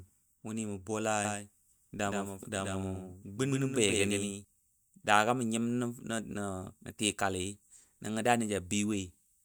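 A doubled audio track runs from 1.25 to 4.45 seconds: a second, full-band copy of the speech trails about 150 ms behind, roughly 5 dB quieter, with no decay or room colour. It switches on and off abruptly, likely from a slower parallel capture path mixed back in.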